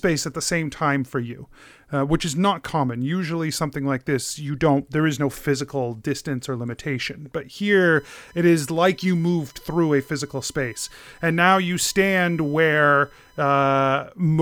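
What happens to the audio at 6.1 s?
Nothing goes wrong at 6.1 s; the speech continues intact through that moment with no dropout, click or other fault.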